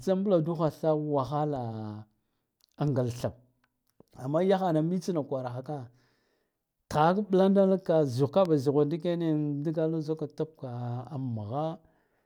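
At 8.45 to 8.48 s, a single loud pop sits a few dB above the speech, which carries on underneath without a gap. A likely electrical voltage pulse caused it.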